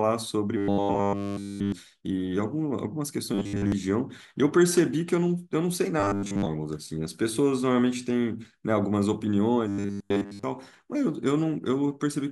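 Speech clip with robotic sound from repeated short buffers at 0.57–1.72 s, 3.34–3.72 s, 6.00–6.48 s and 9.68–10.43 s. Each passage becomes a rigid metallic buzz fixed at 100 Hz, which likely comes from a roughly 10 ms stretch of audio being looped while fresh audio arrives too late. The first and last passages are taken over entirely, the middle two mostly. Unlike mains hum, the buzz stops between passages and still roughly follows the speech.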